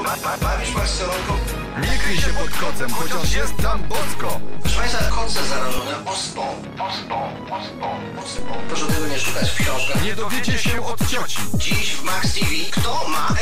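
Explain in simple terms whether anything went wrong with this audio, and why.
A DC step happens twice: at 1.9 s the waveform's resting level suddenly jumps, giving a low thump, then drops back at 5.79 s with another; it jumps again at 8.39 s and stays shifted to the end. Unlike a dropout, the sound itself continues unchanged throughout.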